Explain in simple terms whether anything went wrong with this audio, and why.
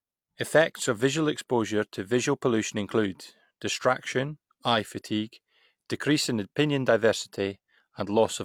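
Nothing went wrong here; the recording sounds fine.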